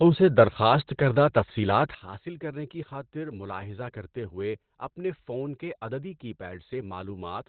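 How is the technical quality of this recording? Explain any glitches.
The recording is heavily degraded throughout and has one abrupt level change partway through.

Across the whole clip, the speech is muffled and hoarse, with nothing above about 4.4 kHz. This is Opus compression, likely in its SILK speech mode at a low rate, consistent with roughly 12 kbps. The narrowed band and hoarse texture set it apart from MP3, which would swirl and leave spectral holes instead.

At 1.95 s, just after "سے درخواست کردہ تفصیلات", the level drops by about 14 dB and stays down until the end. This is a sudden gain jump, likely a digital gain setting applied with no ramp. Speech and background noise fall together in one step, unlike a fade or a speaker moving away.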